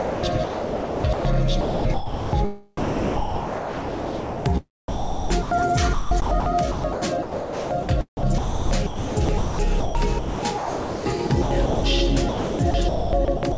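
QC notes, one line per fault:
0.00–1.25, 1.61–2.33, 4.88–5.51, 5.93–7.89, 8.17–11.84 and 12.29–13.57 s, sound chopped by the voice detector: the audio keeps cutting in and out, with comfort noise covering about 0.95, 0.63, 0.51, 1.08, 2.1 and 0.72 s of those stretches. A sender-side voice detector is likely toggling transmission on quieter parts, and the sound sits in a band that stops near 8 kHz.
2.77–4.45 s, sound dropped by the voice detector: here the sound disappears entirely for 1.68 s and gives way to steady, even comfort noise, then picks back up at 4.45 s. The likely cause is the detector deciding the quieter material was just background and stopping transmission for the whole stretch, so the receiver fills the gap with generated noise until sending resumes.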